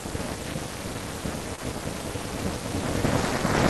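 Overlap-add ripple runs throughout. Badly overlapped frames make the level swing by about 60 dB, roughly 400 times a second. It sounds like a metallic buzz with extra tones around each note.

From 1.55 to 1.60 s there is a short concealed packet loss. About 20 ms of audio went missing. The decoder stretched the preceding sound across the gap, which leaves a brief smear.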